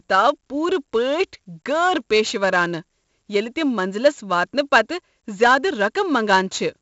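Across the whole speech clip, 4-bit ADPCM compression leaves a gritty hiss that rises and falls with the loudness of the speech, because each sample is coded as a coarse step from a predicted value and the quantization error scales with that step. The damage is heavy, with roughness on abrupt onsets. Nothing sounds above 7.7 kHz, which fits a 64 kbps stream. Unlike perceptual codecs, the noise is broadband rather than warbling or swirly.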